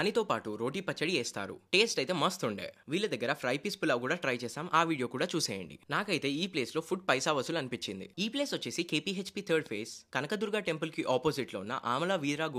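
No technical faults can be heard anywhere in this audio. There is nothing here that needs a timestamp or a repair.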